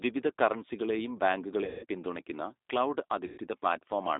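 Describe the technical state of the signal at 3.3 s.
Right there you're inside a stretch of VoIP packet loss concealed by the speech codec, running 3.26 to 3.38 s. About 120 ms went missing, and the decoder bridges it by extrapolating its last pitch and filter, so the sound smears into a fading buzzy tone or coloured noise. Underneath sits the G.729 codec at 8 kbit/s. Its pulse-based reconstruction leaves a plainly audible rough, synthetic edge, with the band held to roughly 250 Hz to 3.7 kHz.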